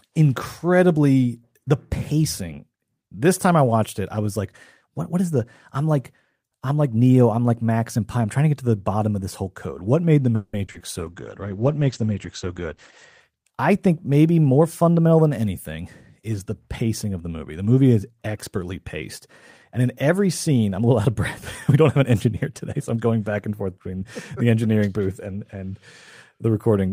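Right after "made the", from 10.35 to 10.82 s, you get a burst of repeated packet loss, and it goes robotic. Four gaps open up in quick succession. The receiver papers over each hole by stretching the last bit of sound it had, which covers about 240 ms. Another 60 ms simply goes missing. The longest gap is 180 ms, so about half of that stretch is patched-in sound, which is why it comes out choppy.

Hard on its heels, from 10.99 to 13.26 s, there's a call bitrate drop. The encoder is pushed down from 32 kbps to 11 kbps and sits at the bottom for about 2.1 s. At that rate it throws away the top end too, so the bandwidth falls from 20 kHz to 8 kHz. The speech turns dull and muffled, with a rough, watery grain, until the bits come back.

Then come two jitter buffer speed-ups. The first runs from 13.70 to 14.27 s, just before "more fundamental than anything". The buffer had built up too much audio, so the receiver cut out short pitch-period slices to catch up, roughly 50 ms in all. 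Playback runs about 7% fast at the same pitch, and it sounds rushed. The second runs from 21.69 to 23.01 s, leading into "back and forth between". It trims about a tenth of a second and runs about 8% fast, so there's the same hurried feel over a longer stretch.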